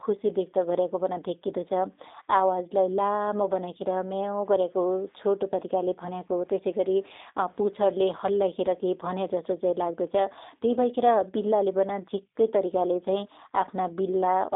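From start to finish the speech sounds thin, rough and faintly synthetic, with nothing above 3.8 kHz and the line confined to about 250 Hz to 3.7 kHz. This is plainly audible G.729 codec damage: frames rebuilt from a filter, pitch predictor and sparse pulses, which fits an 8 kbit/s G.729A stream.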